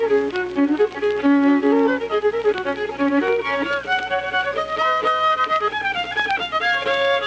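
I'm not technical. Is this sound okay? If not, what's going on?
Yes, this sounds fine: it came through an ordinary internet call connection, which cuts off the very highest sounds, as calls normally do, and nothing is wrong with it.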